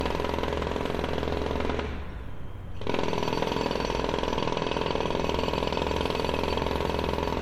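Throughout, the sound is swirly, smeared and hollow, with blurred attacks and nothing above 19.9 kHz, more degraded than a single 96 kbit/s MP3 pass would explain. This is likely generation loss, with roughly seven successive re-encodes each adding fresh quantisation noise and spectral holes.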